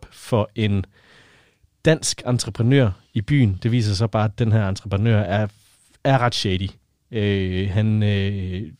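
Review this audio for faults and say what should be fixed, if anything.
Nothing needs fixing, as the speech signal shows no technical faults at any point in the recording.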